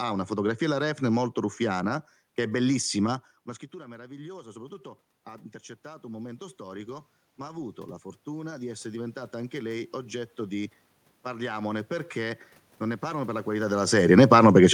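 From 3.71 s to 13.5 s there is automatic gain rising. After the talker moves away from the microphone at around 3 s, the level drops by about 19 dB, and the gain control slowly adds back about 16 dB. The voice and the room noise swell together over those ten seconds.

From 13.88 s to the end there is automatic gain falling. The talker comes close again at around 13.5 s, so the input turns loud while the gain is still raised, and the control pulls it back down. The speech starts too loud, then sinks along with the room noise.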